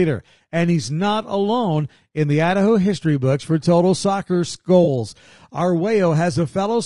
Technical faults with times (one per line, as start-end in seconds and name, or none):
0.00-6.85 low-delay AAC compression
4.83-4.88 AAC frame loss with concealment